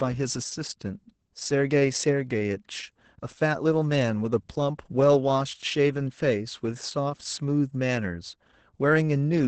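From start to finish the speech sounds muffled, hoarse and faintly robotic, with nothing above 8.7 kHz. This is heavy Opus voice compression: the SILK coder, kept to wideband, codes the excitation coarsely at a rate that fits about 10 kbps.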